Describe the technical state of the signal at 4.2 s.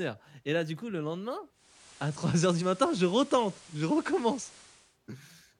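At 4.2 s the speech carries hiss roughly 25 dB down and shifts about 3 dB in level. This is digital radio blending to analogue FM, from 1.52 s (just after "du coup le lendemain") to 4.99 s, with 394 ms cross-fades.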